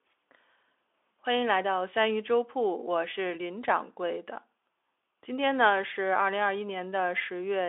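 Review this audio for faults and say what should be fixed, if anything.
No faults; nothing needs fixing.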